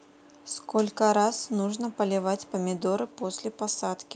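Nothing stood out as a technical fault anywhere in the speech on listening.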